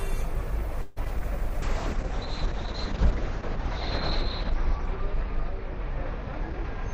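Repeated packet loss (robotic sound) hits this everyday-sound recording from 0.81 to 1.22 s. Four separate gaps open up, the longest about 150 ms. The receiver covers them by stretching out the last good audio, so about 169 ms is synthetic fill and about 60 ms is simply absent. Some 41% of that stretch is concealment, which gives the choppy, robotic texture with holes in it. A jitter buffer slow-down follows from 1.25 to 3.50 s. Having run low on buffered audio or just raised its target delay, the receiver rebuilds its reserve by repeating small fragments of the signal, adding about 51 ms in total. Playback drops to 98% speed without any pitch change, so sounds in that window are slightly drawn out and can waver a little. A call bitrate drop begins at 1.63 s and lasts to the end of the clip. The encoder's budget falls from 64 kbps to 7 kbps and stays at that floor for about 2.6 s. The codec quantises far more coarsely at that rate, and the audio bandwidth shrinks from 20 kHz to 6 kHz. 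The result is a rough, watery, muffled sound with the upper frequencies gone.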